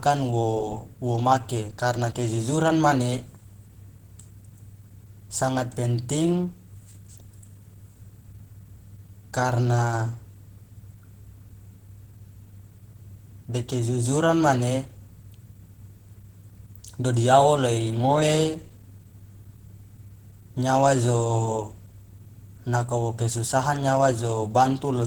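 Speech runs through the whole clip with plainly audible Opus compression damage. The voice sounds hoarse, rough and grainy rather than swirly. That texture points to the codec's hybrid mode, where a speech coder handles the low band and a transform coder fills the top. The audio still extends to about 20.1 kHz, so the bandwidth is not narrowed. The likely cause is a low bitrate, which fits around 16 kbps.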